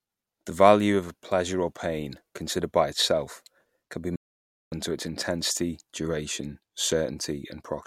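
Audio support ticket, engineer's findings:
Playback stall at 4.16 s: speech cuts out mid-flow, silent about 560 ms, resumes 4.72 s. Likely player-side starvation, buffer ran dry or playback thread got blocked, output held silent until data caught up. Worth checking buffering on the client end.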